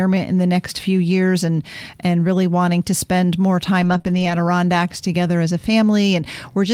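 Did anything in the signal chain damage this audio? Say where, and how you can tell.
Yes. At the network and codec stage, packets were lost and rebuilt from error correction at 3.81 to 3.95 s and 4.06 to 4.32 s, about 80 ms and 140 ms of audio. The decoder played low-bitrate redundant copies, so the speech continues without gaps but sounds rougher and noisier.

Between those stretches, short concealed packet loss at 3.97 to 4.02 s and 4.02 to 4.06 s leaves two 20 ms holes with no backup copy. The decoder extrapolates the preceding sound and crossfades back, producing a brief smear or wobble.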